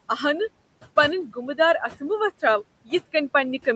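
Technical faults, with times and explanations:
Throughout: noise suppressor artifacts, the room noise pulled down by about 21 dB between phrases and left rising under speech, unlike steady hiss that never dips.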